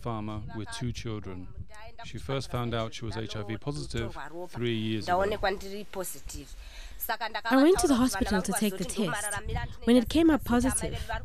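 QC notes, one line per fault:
No faults heard anywhere in this clip.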